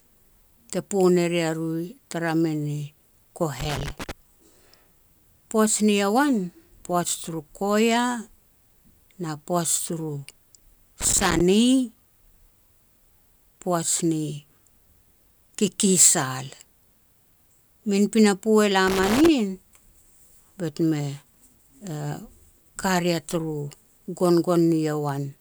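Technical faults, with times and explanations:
3.60–4.11 s, 11.01–11.41 s, 18.87–19.28 s: loose connector crackle, irregular bursts of scratching as a worn contact intermittently breaks the signal path, chopping the speech.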